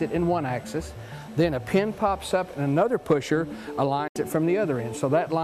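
A digital broadcast dropout hits at 4.07 s. The receiver stopped getting valid frames and muted, fading the sound out over 8 ms into a 72 ms silent hole, which fits three lost frames. Sound resumes at 4.16 s, and the missing stretch is lost.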